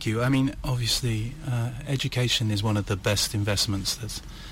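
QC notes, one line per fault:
Nothing to flag here, the audio comes across fine with no faults heard anywhere.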